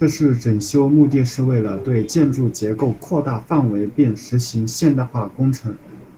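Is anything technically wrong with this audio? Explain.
Yes. Opus voice compression runs throughout the speech. The codec appears to be in hybrid mode, with SILK's linear prediction below 8 kHz and CELT above, at a rate that fits about 16 kbps. The coarsely coded excitation is plainly audible, making the speech hoarse and slightly robotic.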